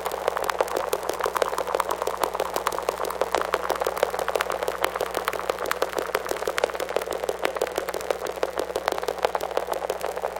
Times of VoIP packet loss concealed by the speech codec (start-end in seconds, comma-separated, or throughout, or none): none